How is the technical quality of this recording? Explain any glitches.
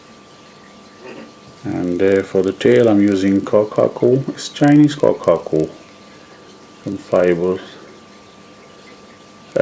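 The recording has a steady block-edge fault throughout. Resampler restarted on every block: each 40 ms block was converted alone, likely from 44.1 kHz down to 16 kHz, leaving edge errors that tick at 25 Hz, a buzz heard only while sound plays, unlike constant hum.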